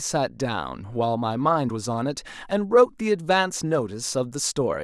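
Speech, with no audible faults.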